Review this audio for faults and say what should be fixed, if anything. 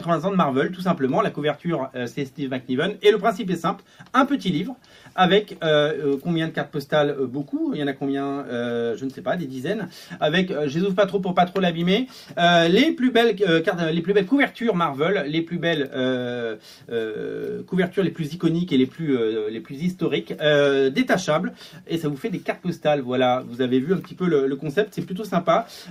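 Nothing to fix: no audible faults anywhere in the recording.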